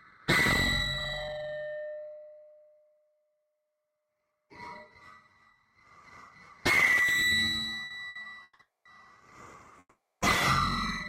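From 7.85 to 8.61 s, packets kept arriving late and the jitter buffer ran dry four times, so the everyday sound drags through repeated stalls (stutter), with 300 ms of held-over fill and the longest gap 160 ms. A call audio freeze follows at 8.61 to 8.87 s and another at 9.79 to 10.23 s, likely from packets held up in transit. The last sound is stretched and then falls silent for about 200 ms and 300 ms respectively, pushing the audio about 240 ms and 420 ms later before it resumes where it stopped.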